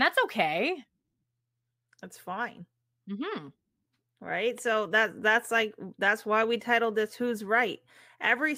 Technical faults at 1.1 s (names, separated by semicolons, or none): lost LE Audio frames